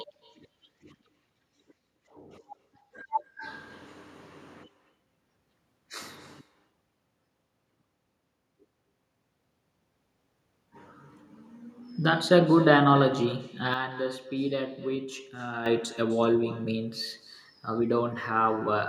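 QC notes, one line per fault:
Throughout: echo with no canceller. The far end's loudspeaker feeds its microphone unchecked, so each phrase returns about 18 dB down, roughly a third of a second later, thin.
13.74–15.66 s: sudden gain jump. Level likely stepped without a ramp, dropping speech and background noise together by 8 dB, then snapping back at 15.66 s.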